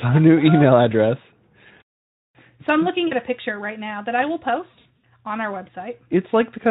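A speech recording with two brief dropouts where the sound smears into a short buzzy tone or coloured noise that fades: once at 3.07 to 3.15 s, and again more raggedly from 4.71 to 5.03 s, where about 200 ms of gaps are scattered across 320 ms, the longest run about 60 ms. This is VoIP packet loss concealed by the speech codec. The decoder extends its last pitch and spectral shape while turning the gain down, leaving the Speex-coded voice weak for a moment afterwards.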